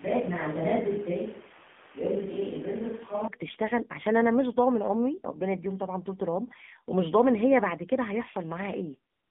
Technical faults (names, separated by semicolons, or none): AMR narrowband mobile codec; switch to a distant microphone; AMR comfort noise